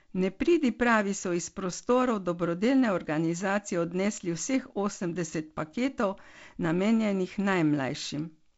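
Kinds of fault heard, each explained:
Nothing here counts as a fault; it's just speech carried over G.722 wideband telephone coding at 48 kbit/s, with nothing above about 7.7 kHz and the light hiss that comes with that coding.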